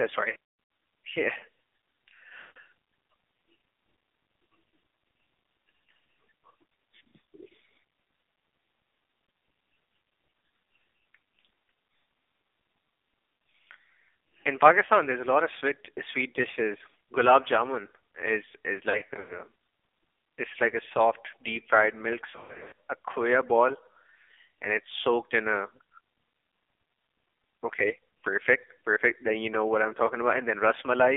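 Throughout, the speech sounds thin, buzzy and synthetic, confined to roughly 250 Hz to 3.6 kHz with nothing above. This is the AMR narrowband mobile codec under heavy strain. The pulse-driven vocal tract model is working with very few bits, which fits a low rate around 6 kbps. The voice keeps its outline but loses its natural grain.

At 0.30 to 0.36 s and 2.40 to 2.58 s, the sound smears, stretches into a warbling hum and sags toward silence before recovering rough and weak. Right after "jamun is is", at 18.90 to 19.39 s, and again at 22.30 to 22.76 s, the same breakup returns as a series of dips and warbles. These are lost AMR speech frames. Each time, the decoder replays its last good pitch and vocal tract settings at falling gain. The longest gaps, about 0.1 to 0.16 s, fade almost fully out.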